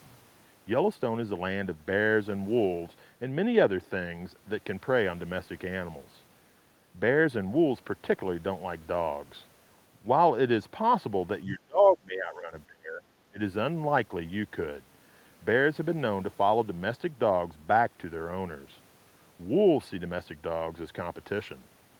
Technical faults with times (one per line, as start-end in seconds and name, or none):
11.44-13.01 speech suppressed in double talk
13.30-13.40 speech suppressed in double talk